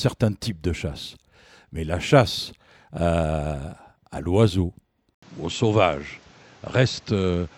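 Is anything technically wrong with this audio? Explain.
Yes. At 5.15 s, just after "à l'oiseau", the speech drops out for 80 ms and returns duller until the end, with nothing above 7.8 kHz and a new noise floor about 30 dB below it, at an unchanged level. This is likely an input switched to a poorer device with a narrower passband and its own noise.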